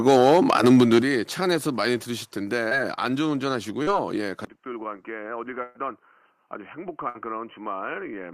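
Right at the start of this speech clip, from 0.07 to 0.99 s, there's microphone overload: the loudest syllables crackle and sound flattened at the top, peaks running about 6 dB past the converter's limit, with roughly 5% of the samples chopped off, most likely because the input gain was set too hot. At 1.02 s the microphone volume is stepped down: everything, background included, drops by about 8 dB in one go, likely the call software reacting to that distortion by trimming the device's input level. Next come two short concealed packet losses, a quick smear around 2.69 s where 20 ms went missing, and a slightly longer wobble from 3.83 to 3.89 s covering 40 ms, both patched over by the receiver stretching the preceding sound before blending back in. At 4.45 s there's a 20 ms dropout, and from there to the end the input has switched to a poorer device, likely a different mic or a headset's call mode: the sound turns dull and boxy, sits about 10 dB quieter, and carries a faint new noise floor well below the speech. 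Finally there are two bursts of packet loss: 5.63 to 5.77 s loses about 120 ms, and 7.09 to 7.17 s about 60 ms, each heard as the last sound being held as a buzz or hiss and fading before the audio picks up further along, with the bit in between gone.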